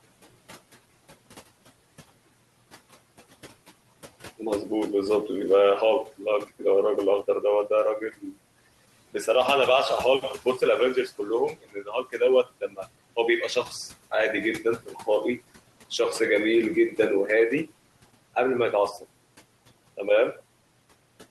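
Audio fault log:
Throughout, noise suppressor artifacts: room noise about 20 dB below speech drops roughly 17 dB in pauses and swells back under talking.
11.54–12.22 s, 12.43–12.87 s, 14.63–15.08 s, speech cut by the noise suppressor: soft speech is mistaken for noise and lowered up to about 17 dB, sounding swallowed for roughly half, a third, and a fifth of a second.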